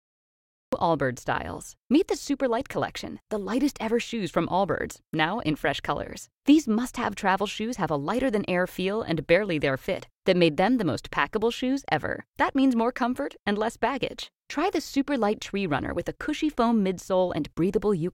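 Speech with a cut-off start: digital silence until 0.73 s, then sound begins abruptly mid-utterance with no attack, unlike a dropout, because nothing precedes it.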